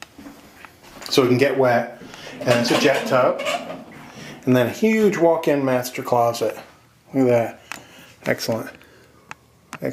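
No technical fault can be heard anywhere in the audio; the signal holds steady and continuous throughout, with nothing added, lost or altered along the way.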